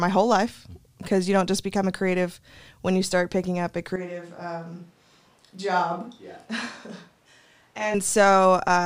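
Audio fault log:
3.96–7.94 s, switch to a distant microphone: right after "start picking up a", the close microphone's feed likely dropped out and a farther pickup took over. The speech turns abruptly roomy, hollow and thinner in bass, about 10 dB quieter, with room noise roughly 30 dB below it.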